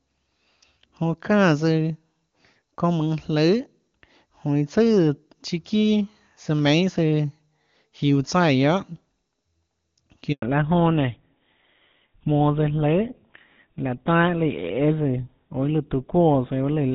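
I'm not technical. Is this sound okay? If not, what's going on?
No. At 10.32 s there is a handover gap: the speech cuts out for a tenth of a second while the call switches networks, unlike a crackly dropout. Right after, at 10.42 s, comes a fallback to narrowband. The clear HD Voice sound before that point gives way to duller, thinner speech with nothing above 4 kHz. The change happens instantly and stays that way to the end, rather than the gradual muffling you would hear if a microphone were covered.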